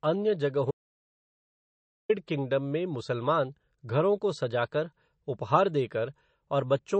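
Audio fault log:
Throughout: MP3 compression. Plainly audible codec damage runs through the speech, with nothing above about 8.3 kHz. The likely cause is a low bitrate, around 30 kbps. Weak frequency lines get dropped and flicker between frames. That gives a watery, swirly sound with smeared attacks.
0.71–2.09 s: audio dropout to silence. The speech cuts out for about 1.38 s, and the gap holds no room tone at all. It resumes just before "किंगडम में". The input was likely lost while recording continued, so anything said in between is gone.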